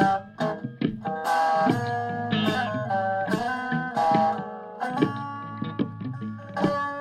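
The music carries no audible technical fault at any point, with the signal holding steady and intact throughout.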